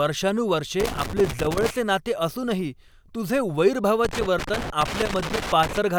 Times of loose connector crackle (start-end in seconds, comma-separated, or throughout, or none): 0.80-1.70, 4.05-5.78